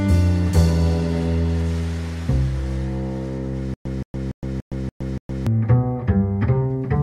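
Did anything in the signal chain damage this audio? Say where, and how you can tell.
Yes. Stutter with silent gaps, 3.74 to 5.47 s. A 172 ms burst repeats six times, with 115 ms of silence between. Likely a stalled playback buffer.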